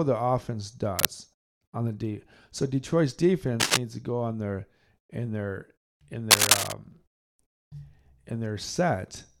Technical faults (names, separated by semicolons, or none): cable scratch noise